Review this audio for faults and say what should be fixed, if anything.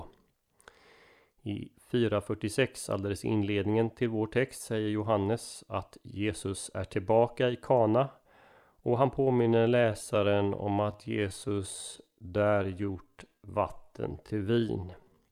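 Time-stretched section, 9.16 s to the end: speech slows abruptly to 0.677× with unchanged pitch, sounding dragged, likely from software repeating short slices to lengthen the audio. To prevent it, re-record or edit the passage to fit the required length instead of stretching it.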